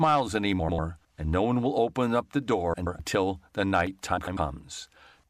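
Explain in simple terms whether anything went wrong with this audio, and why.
Three brief garbled flutters come from frames out of order: at 0.59–0.79 s before "and no one will", at 2.74–3.00 s between "will open up the" and "the night", and at 4.18–4.37 s after "the night". Two neighbouring chunks, 96–128 ms each, play swapped. Nothing's actually lost.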